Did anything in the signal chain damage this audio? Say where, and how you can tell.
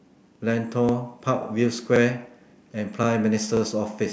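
Yes. Overlapping chunks at 0.35, 0.89, 1.43, 1.96, 2.50, 3.03 and 3.57 s point to the buffering stage: each 0.5 s chunk starts 36 ms early, so that slice repeats as a regular stutter.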